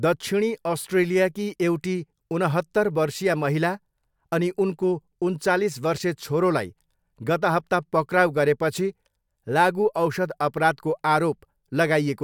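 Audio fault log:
No faults were found in this speech clip.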